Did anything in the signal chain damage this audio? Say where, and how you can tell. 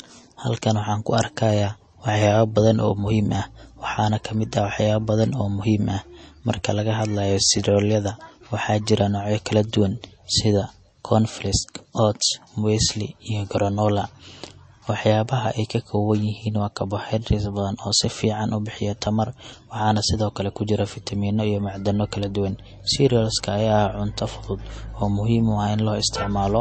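Yes, at the codec stage, likely MP3 compression. Throughout the speech nothing sits above 8.4 kHz, and the coding damage is plainly audible, which fits a low bitrate around 32 kbps. Unlike a clean low-pass filter, weak frequency lines flicker between frames, leaving a watery texture.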